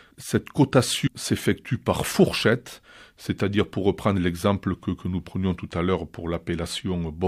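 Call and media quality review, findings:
At 1.06–1.08 s, the speech jumps ahead roughly 0.4 s. Compressed frames skipped in the decoder; the gap fits about fifteen 26 ms frames.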